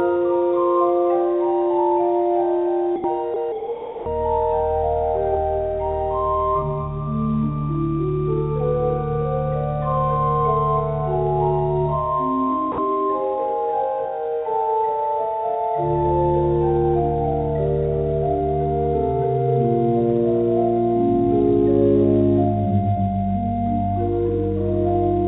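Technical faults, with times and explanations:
2.96–3.04 s, 3.34–3.36 s, 3.52–4.06 s and 12.72–12.78 s, sound dropped by the voice detector: the audio briefly gives way to a flat, steady hiss, then returns. That's likely the sender's detector mistaking quieter passages for background, with comfort noise filling those gaps (the longest about half a second) over the 4 kHz-limited G.711 line.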